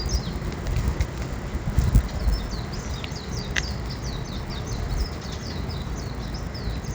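From start to finish, a faint buzz rides on the sound. It is a resampler restarted on every block. The 16 kHz to 48 kHz conversion handled each 10 ms block separately, leaving a small error at every edge. These repeat at 100 Hz and vanish in silence.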